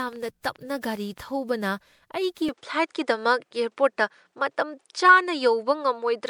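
Repeated lossy re-encoding, likely around ten passes through MP3 at 128 kbit/s, causes generation loss throughout, making the speech swirly, smeared and hollow, with blurred attacks.

From 0.07 to 1.19 s, a train of clicks, likely from interference pulses, ticks over the speech at about nine per second, unevenly spaced and roughly as loud as the speech.

At 2.49 s the input likely switched to a poorer device. With no gap, the sound turns duller and cuts off above 9.8 kHz until the end. The level shifts by a few decibels, and faint new background noise sits far below the speech.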